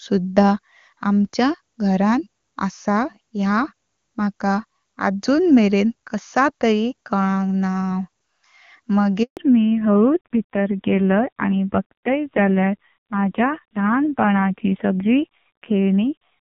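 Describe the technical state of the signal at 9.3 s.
At 9.3 s the sound is simply absent: it fades out within a few tens of milliseconds and stays silent from 9.23 to 9.37 s, about 140 ms. This is a handover gap. The call was switched between networks, and no speech frames arrived during the transfer, so whatever was said in that window is lost.

When sound returns at 9.37 s it is duller and rougher, with nothing above 4 kHz, and stays that way to the end. This is a fallback to narrowband. The HD Voice wideband link at 23.85 kbit/s, clear up to that point, gave way to an older narrowband codec, and the raspy texture fits a low-rate mode around 5.9 kbit/s.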